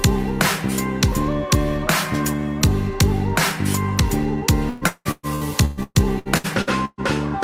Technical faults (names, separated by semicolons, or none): repeated packet loss (robotic sound)